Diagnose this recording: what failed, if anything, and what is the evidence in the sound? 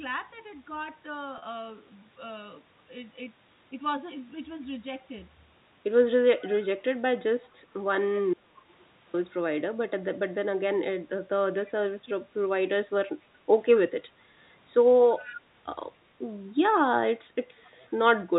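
Network stage: packet loss with pitch repetition. At 1.38 to 1.42 s, about 40 ms of signal goes missing, which fits two lost 20 ms packets. The receiver's concealment bridges the hole by looping the last pitch period. The result is a brief, slightly sustained buzz where the speech should continue. The gap is too short for the fade to reach silence, so the speech resumes directly.

Audio dropout to a faint residue, 8.34 to 9.14 s. The speech cuts off abruptly for about 0.8 s and returns just as sharply. This is not a pause or a fade. The gap is not silent. A faint trace remains, roughly 40 dB below normal level. That residue means everything after the break kept passing sound. The likely cause is an interruption in the signal feed ahead of a still-live path, not a muted stream.

Call processing stage: echo leak. A delayed copy of the speech, 259 ms behind the original, appears at 11.66 to 11.72 s, 15.19 to 15.36 s and 17.57 to 17.70 s. 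The first and last scraps are about 35 dB down. The middle one is stronger at about 20 dB down. The constant delay points to one acoustic path, likely a far-end loudspeaker whose echo canceller let residual pickup through. The G.711 telephone band limits all of this to below 4 kHz.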